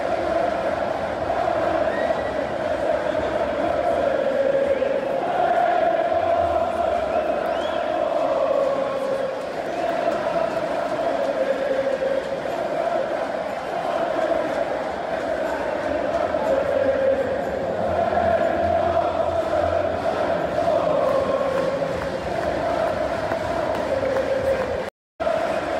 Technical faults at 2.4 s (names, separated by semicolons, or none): none